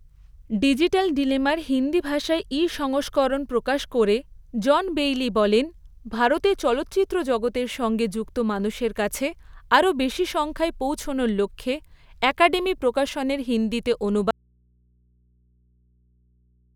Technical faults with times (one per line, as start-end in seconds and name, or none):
14.31-16.76 audio dropout to a faint residue